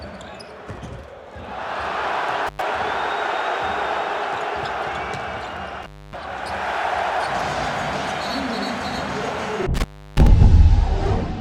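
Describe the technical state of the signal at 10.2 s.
At 10.2 s you're inside an intermittent contact fault running from 9.74 to 10.27 s. A loose plug or cable briefly loses connection, so the sound drops out for about 330 ms, with crackle where the contact breaks and remakes and only faint hiss in between.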